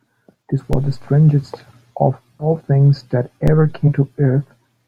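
At 0.73 s a DC step occurs: the waveform's zero line jumps to a new offset, and a slow high-pass, around 2 Hz, lets it drain back toward zero. The jump itself is heard as a low thump, while the speech carries on unchanged with nothing missing. That intact continuity separates it from a dropout or skip. The same thump recurs at 3.48 s.

From 2.39 to 2.47 s, compressed frames are skipped. The decoder never plays a few frames, either because they are lost or because they were rejected as damaged, so the speech jumps ahead by around 70 ms. That jump fits a 20 ms frame length. Unlike the DC step, audio really is lost. A second skip follows between 3.87 and 3.89 s.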